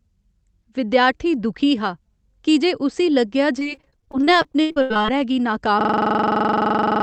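From 3.59 to 5.10 s, repeated packet loss (robotic sound) leaves a choppy stretch. Gaps up to 80 ms, concealed by stretching the last sound over about a third of the span, appear as smeared, repeated spectrogram columns.

From 5.81 s to the end, a system hang loop repeats one 42.67 ms piece, which fits a 2048-sample buffer. It loops at 23.4 Hz and shows as an identical, periodic waveform pattern.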